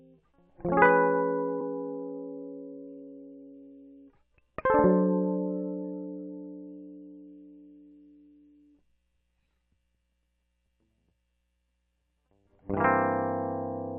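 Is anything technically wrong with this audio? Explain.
Yes. At 1.6 s, compressed frames skipped: the music jumps ahead about 20 ms, consistent with one missing 24 ms frame.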